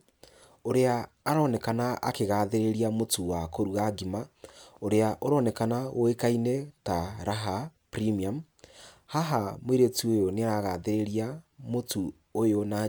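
A recording of speech with no technical fault to be heard in it. Nothing goes wrong at any point, so there are no times or causes to report.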